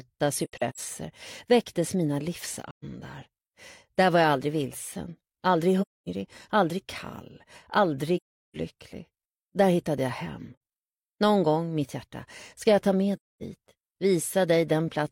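AAC frame loss with muting strikes six times: at 0.44 to 0.80 s, where about 213 ms of audio goes missing in scattered pieces over roughly 340 ms, the longest run about a tenth of a second; 2.70 to 2.84 s; 5.81 to 6.09 s; 8.16 to 8.57 s, the longest at 384 ms; 10.52 to 10.60 s; and 13.16 to 13.43 s. Each time, frames failed to arrive and the decoder zeroed their spectrum, so the overlapping windows fade the sound out and back in, leaving soft-edged holes.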